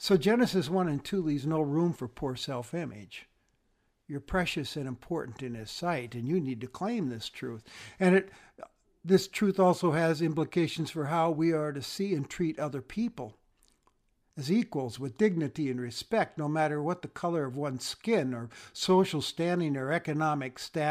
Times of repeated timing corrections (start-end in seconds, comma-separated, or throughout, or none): none